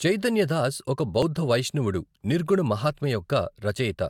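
A speech recording with no audible technical faults.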